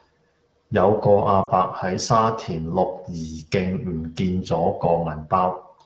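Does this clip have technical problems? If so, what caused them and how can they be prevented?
Yes. Lost AMR speech frames cause a brief dip toward near silence from 1.43 to 1.51 s, about 40 ms, which fits two dropped frames. Radio errors corrupted them, so the decoder kept reusing its last good pitch and vocal tract settings while lowering the gain. Unlike a hard dropout, there is no click, just a smeared, sagging moment that fades to near silence, and the voice comes back briefly weak or rough. Stronger radio coverage or better channel error protection would prevent it.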